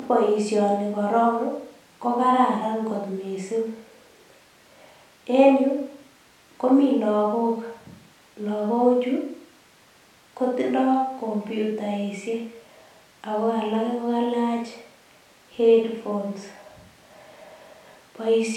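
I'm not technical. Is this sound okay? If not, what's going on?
Yes, this sound is okay, and nothing is going wrong with it.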